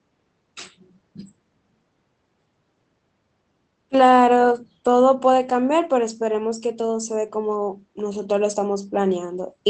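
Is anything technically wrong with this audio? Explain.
No, nothing technically wrong.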